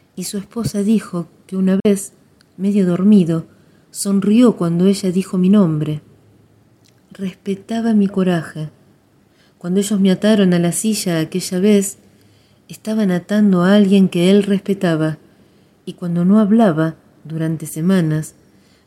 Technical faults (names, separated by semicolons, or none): Bluetooth dropout